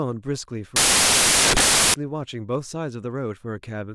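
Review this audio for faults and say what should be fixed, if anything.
Samples built from the wrong bytes, from 0.76 s to 1.94 s. For this stretch of the speech, the reader assembles each sample from mismatched bytes, whether shifted by one, swapped in order or misaligned. The rapidly varying low-order bits end up as the dominant part of every value, so the audio turns into loud, harsh broadband noise. To prevent it, fix the decoder's byte order and alignment to match the stream format and verify them.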